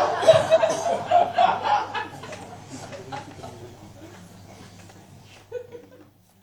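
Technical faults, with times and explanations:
0.51–0.58 s: damaged data in a compressed stream. For about 64 ms the audio breaks into a brief glitch that does not belong to the surrounding sound. The compressed data for this stretch has been corrupted, with bytes lost, zeroed or overwritten, so the decoder misreads or rejects those frames, loses frame sync and hunts for the next valid header before normal decoding resumes.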